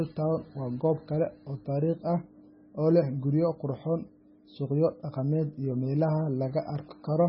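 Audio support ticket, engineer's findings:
Speech watery and swirly throughout, s sounds chirpy and metallic, attacks smeared; nothing above 5.6 kHz. Likely MP3 compression, heavy damage, consistent with a very low bitrate around 16 kbps. Encoder short of bits, treble cut at fixed frequency, weak spectral lines zeroed, flickering frame to frame.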